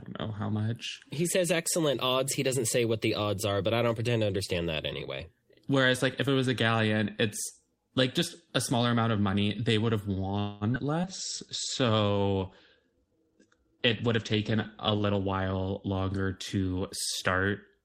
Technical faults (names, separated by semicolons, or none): call audio freeze; short concealed packet loss; call bitrate drop; jitter buffer slow-down; jitter buffer speed-up